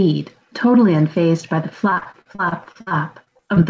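Repeated packet loss (robotic sound), 1.90 to 3.58 s: gaps up to 56 ms are filled by extending the last sound, so speech turns choppy with pieces missing.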